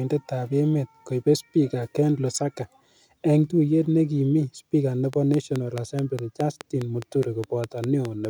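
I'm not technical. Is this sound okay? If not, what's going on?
No. From 5.13 s, right after "ne ki mi speaker", to 8.26 s, there is a train of clicks: about five sharp ticks per second, evenly spaced, roughly fifteen in all, each louder than the speech and heard in the pauses too. Unlike random crackle, these ticks sound alike and keep a steady beat. That points to something repeatedly injecting a pulse, likely electrical interference from nearby equipment or a faulty connection or power supply.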